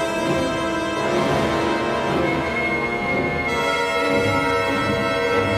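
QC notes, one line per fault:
Nothing to flag here; I listened through and found no faults anywhere in the audio.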